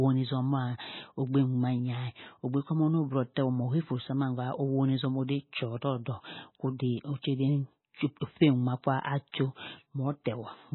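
From start to finish the speech sounds dull and watery, with nothing above 4 kHz and a swirling, warbling texture as weak spectral detail flickers in and out. This is likely heavy MP3 compression, consistent with a bitrate near 16 kbps.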